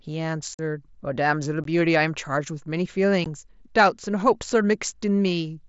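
At 0.54 s a 45 ms hole opens in the speech, followed by 15 ms gaps at 1.64 and 3.24 s. This is unconcealed Bluetooth headset packet loss: missing link packets become bare silence with abrupt edges, not the smeared repeats heard when losses are concealed.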